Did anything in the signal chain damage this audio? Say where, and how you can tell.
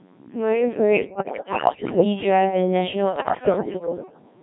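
Yes. The codec stage damaged the whole clip. This is the Codec 2 vocoder. The speech sounds robotic and buzzy from start to finish. The heavy smearing fits the 1.3 kbit/s mode. Only pitch, voicing, energy and a spectral envelope survive. Sine-wave synthesis rebuilds the rest.

The radio link added bit errors on digital voice radio. They occur from 1.00 to 2.04 s, and again from 3.16 to 4.22 s. The voice jumps in pitch, level and tone there. It breaks into warbles and bleeps. Roughly one bit in ten flips first, then more.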